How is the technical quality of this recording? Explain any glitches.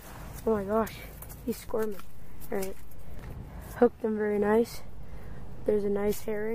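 The recording has two DC steps. At 1.69 s a low thump is heard, and another at 3.19 s, while the sound carries on unaffected. A third thump comes at 4.75 s. Each is the waveform's zero line suddenly jumping, by about -32 dBFS in the first case. That offset holds until it snaps back at 3.19 s. The second jump, about -35 dBFS, stays in place to the end. These abrupt baseline shifts are what produce the thumps.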